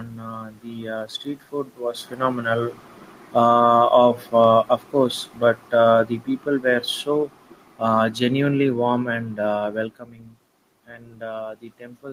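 Right after "street food was phenomenal", at 3.24 s, the automatic gain control judges the input too loud and pulls its gain down by about 6 dB over 3.24 to 3.66 s, an automatic gain falling event. The level sinks, and the room noise sinks with it. From 3.58 to 4.78 s the control judges the input too quiet: automatic gain rising lifts the gain by about 5 dB, so the speech and background swell together across a second. Then, from 4.24 to 9.73 s, a second, slower gain fall lowers everything by about 7 dB, a gradual fade shared by speech and room noise alike. This is unlike the level shifts near 2 s and 10 s, where the talker moved relative to the microphone.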